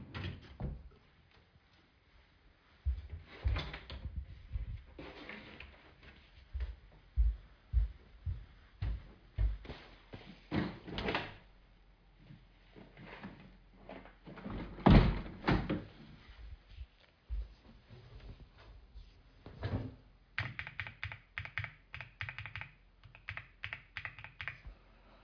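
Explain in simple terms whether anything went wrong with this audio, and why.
Nothing went wrong with it.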